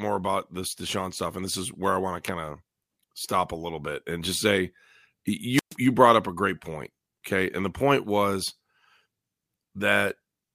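A wireless microphone squelch dropout occurs from 5.53 to 5.76 s. The FM radio link weakens until the receiver's squelch shuts the output, so a short burst of hiss gives way to a near-silent hole of about 124 ms before the speech returns.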